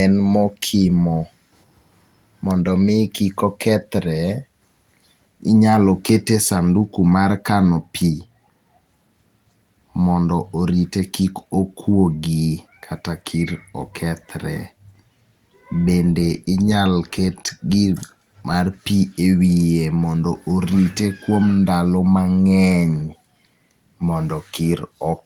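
Speech recording, with no technical faults detected anywhere in the audio.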